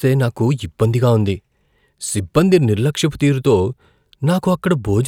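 No dropouts, glitches, distortion or level jumps appear anywhere in this speech recording.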